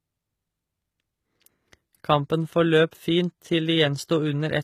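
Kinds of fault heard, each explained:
HE-AAC compression: The speech was likely encoded with HE-AAC v2 at a low bitrate, which fits about 20 kbps. The codec codes only the lower spectrum and rebuilds the treble by copying lower bands upward under a coarse envelope. Throughout the clip the damage is plainly audible: the top end has the brightness but not the original detail, its harmonics don't line up with those below, and nothing sounds above 14.9 kHz.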